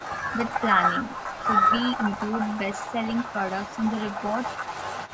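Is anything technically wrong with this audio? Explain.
Yes. From 5.07 to 5.11 s a faint, delayed copy of the speech returns about a quarter second late, well below the direct sound. This is an echo leak, likely from a far-end loudspeaker whose echo canceller let residue through. Unlike room reverberation, it is a discrete late repeat, not a smooth decay.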